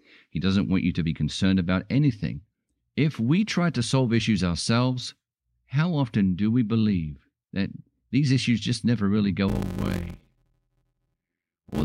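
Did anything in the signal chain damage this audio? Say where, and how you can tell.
Yes, in the driver or buffer stage: from 9.48 s to the end at 11.84 s the speech carries an 86.1 Hz buzz and plays at 0.625 times speed with near-normal pitch. This is a block size mismatch (padded). Short blocks are zero-filled to what fits a 512-sample read.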